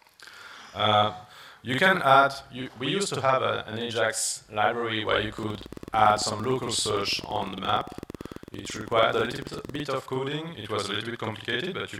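A channel delay (doubling) runs through the whole clip, from the first second to the end. One channel arrives about 46 ms after the other, which fits a 2048-sample buffer, and the two are folded together into mono. At that gap the ear no longer fuses them, so every onset is followed by a second copy at equal level. The sound comes across as doubled, with a short slap echo trailing each attack.

A train of clicks sits on top of the sound from 5.39 s to 9.76 s. Sharp, near-identical pulses arrive at a steady 8.9 per second, around forty in all, peaking roughly 5 dB above the programme. They register as an even ticking that continues through pauses as well as louder passages. The likely cause is interference from nearby equipment or a faulty connection or power supply injecting pulses into the signal path.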